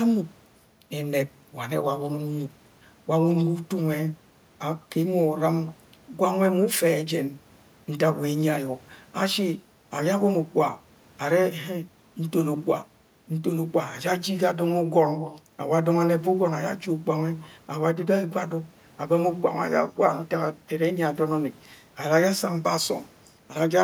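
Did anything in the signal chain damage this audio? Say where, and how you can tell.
No, nothing in this speech recording stood out on listening as damage from any stage of the signal chain.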